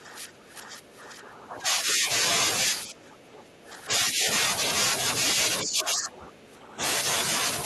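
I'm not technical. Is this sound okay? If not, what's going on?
No. The voice keeps sinking and thinning out, from 0 to 2.08, 2.86 to 3.91, 4.11 to 4.27 and 5.63 to 6.81 seconds. This is likely speech suppressed in double talk: a call's echo-cancelling system, confused by both sides speaking together, turned this voice down along with the echo.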